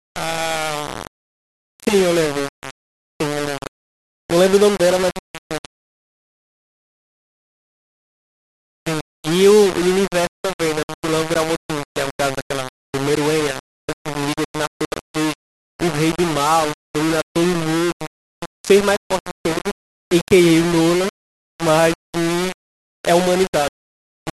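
A speech recording with grainy, buzzing distortion from start to finish that rises and falls with the talker rather than sitting underneath as steady hiss. Louder syllables carry a rough, fizzy edge, while softer passages and word tails break up into crackle or sputter between a couple of levels, with the error only about 10 dB below the signal. The likely cause is low bit depth without dither: samples rounded to very few levels, consistent with roughly 4-bit quantisation.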